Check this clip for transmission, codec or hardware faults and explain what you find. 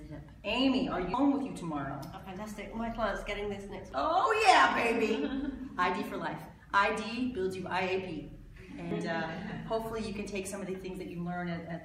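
Three brief glitches point to damaged data in a compressed stream, at 1.14, 3.92 and 8.91 s. At each point corrupted bytes make the decoder misread a frame and resynchronise on the next header, producing a tiny squawk or blip.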